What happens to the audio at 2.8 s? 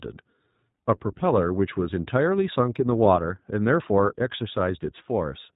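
The iLBC codec affects 2.8 s, as it does the whole clip. Nothing above 4 kHz passes. Independently coded frames, likely the 15.2 kbps mode, make the speech sound plainly rough and synthetic.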